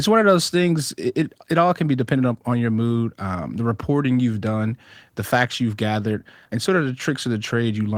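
Nothing faulty in this speech clip: the Opus coding at 20 kbps in hybrid mode leaves only light codec texture and no audible defect.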